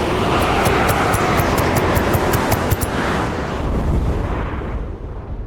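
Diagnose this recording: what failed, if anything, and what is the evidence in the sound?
A call bitrate drop at the codec stage begins at 3.28 s and lasts to the end of the clip. The sound turns coarser and rougher as the encoder spends fewer bits, which fits a fall from about 32 kbps to about 14 kbps, bottoming out for 1.23 s.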